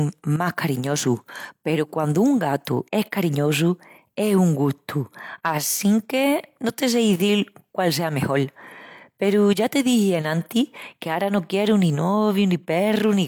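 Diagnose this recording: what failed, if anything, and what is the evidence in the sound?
Nothing failed: there is no fault to diagnose and no evidence of one in the sound.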